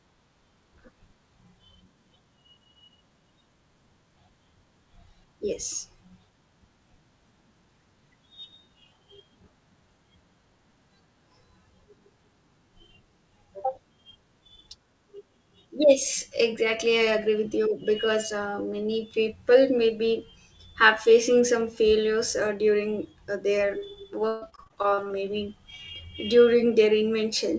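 From 24.28 to 25.12 s, repeated packet loss sets in: eleven gaps in under a second, the longest about 137 ms, each patched by stretching the previous sound. Nearly half the stretch is concealed, so the speech turns choppy and robotic, with pieces missing, above a band that stops at 8 kHz.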